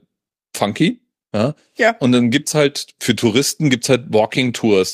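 A short speech recording with no technical fault to point to. Nothing in the audio calls for a time or a cause.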